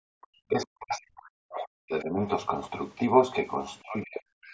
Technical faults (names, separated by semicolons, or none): background gated by the echo canceller; other side's voice leaking through; speech suppressed in double talk